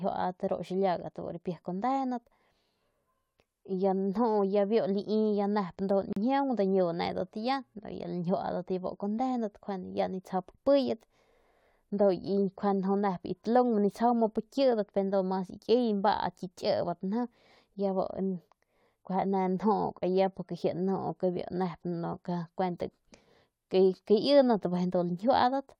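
Gap at a join of encoded pieces, 6.13 to 6.16 s: separately encoded segments were spliced untrimmed, leaving a 37 ms silent dropout with smeared edges in the speech.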